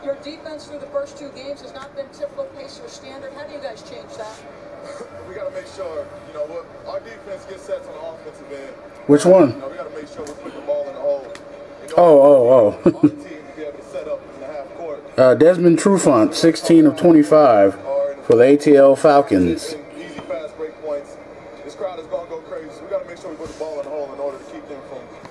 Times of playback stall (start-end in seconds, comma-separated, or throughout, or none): none